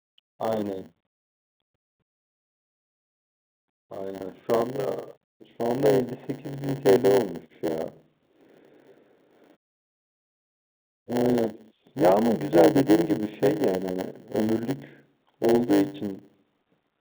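From start to finish, the speech carries a block size mismatch with zero padding. One stage hands over blocks a little shorter than the next stage reads. The missing tail of each block is filled with silence. That tiny gap repeats 100 times a second, so a steady 100 Hz buzz rides under the speech. The gaps also stretch time. The speech runs at about 0.92 of normal speed, yet the timbre stays put. The telephone band, topping out near 3.7 kHz, is heard through all of this.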